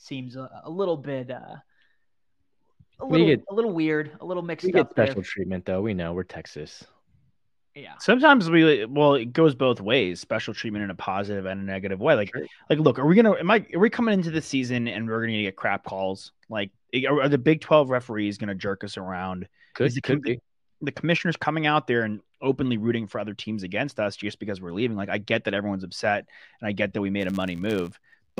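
From 27.2 s to the end at about 28.4 s, just after "I get that we", a buzz at 100 Hz rides on the speech and tracks its level. This is a filter restarted on every block: it drops its state and starts from silence, so each 10 ms block begins with a small tick.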